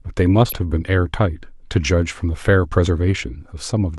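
At 0.49 s the speech carries a corrupt frame decoded, lasting until 0.53 s. Flipped bits in a few compressed frames were played anyway. Misread gains put energy at wrong frequencies. It sounds like a short squeaky burst, peaking near about -15 dBFS.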